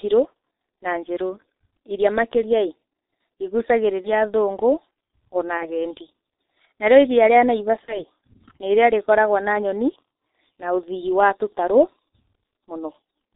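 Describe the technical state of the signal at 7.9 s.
At 7.9 s the sound is running through G.723.1 concealment of VoIP packet loss, from 7.86 to 8.04 s. About 30 ms of audio is missing, which fits one lost frame. The decoder repeats its last pitch and filter with falling gain. This gives a brief stretched sound that fades. Weak, distorted speech lingers after packets resume.

Underneath, the whole clip carries the G.723.1 codec at about 6.3 kbit/s. Nothing above 4 kHz survives, and the slow model updates damage it heavily. The speech sounds muffled and hoarse. Consonants are smeared throughout.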